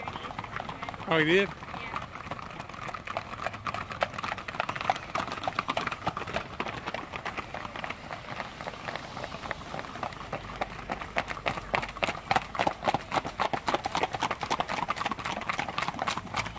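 No technical faults can be heard anywhere in the audio.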